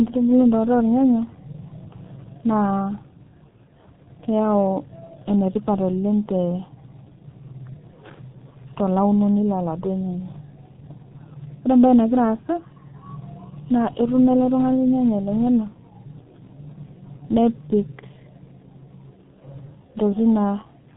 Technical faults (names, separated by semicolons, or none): G.723.1 codec